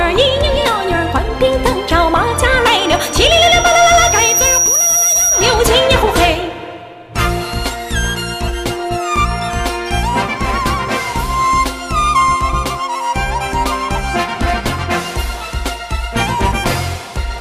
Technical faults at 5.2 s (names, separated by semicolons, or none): loudspeaker feedback squeal